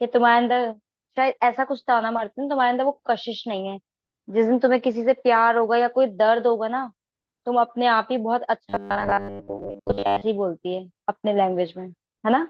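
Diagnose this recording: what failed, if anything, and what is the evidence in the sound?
The buffer stage failed. From 8.70 to 10.26 s the speech becomes a rigid, metallic 100 Hz buzz. This is robotic sound from repeated short buffers. Most of that stretch repeats 10 ms slices while fresh audio is skipped, likely because data arrived too seldom.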